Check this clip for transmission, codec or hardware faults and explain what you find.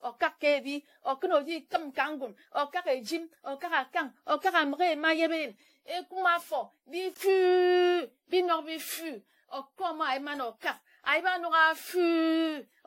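One codec fault runs through the whole clip: generation loss. The speech was likely decoded and re-encoded around ten times with AAC-LC, and each pass quantised again on a shifted frame grid, so the errors and spectral gaps piled up. The result is swirly and hollow, with smeared attacks. Nothing remains above 16.5 kHz, which fits a 64 kbit/s encoding.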